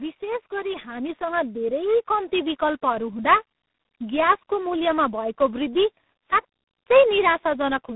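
From the very start the speech carries tandem speech coding: it sounds rough, muffled and warbly, as if passed through more than one low-rate telephone coder in turn, each re-encoding the damage left by the one before. The character fits a very low-rate coder such as G.723.1 at around 6.3 kbit/s followed, after a G.711 A-law hop, by G.726 at 24 kbit/s. On a spectrogram the energy stops sharply at about 3.9 kHz, with smeared, blotchy harmonics below.

Between 0.19 s and 2.4 s there is automatic gain rising. The gain control judged the input too quiet and turned it up gradually, by about 8 dB over roughly two seconds. Voice and background swell together rather than the speech alone getting louder. On a waveform the envelope widens steadily across that span, and a spectrogram shows the whole band, noise floor included, brightening in step, until the level settles after 2.4 s.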